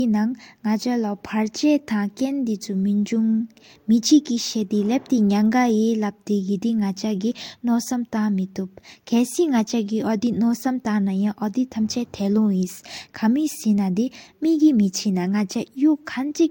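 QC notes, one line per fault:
Throughout: transcoding between lossy codecs. The speech has nothing above 16.6 kHz, and two kinds of coding artefact are heard together. This likely comes from an MP3 at around 96 kbit/s re-encoded to Vorbis at around 60 kbit/s. The second encoder spends bits reproducing the first one's damage and adds its own, while the lower cut-off stays in place.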